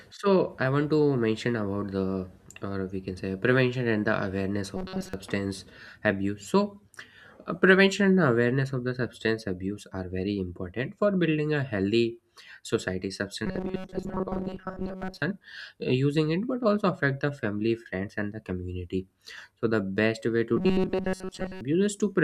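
Speech with robotic sound from repeated short buffers at 4.77–5.14 s, 13.46–15.22 s and 20.57–21.61 s: a rigid metallic buzz near 188 Hz. That likely comes from a 5.3 ms fragment being looped while most of the real audio is skipped.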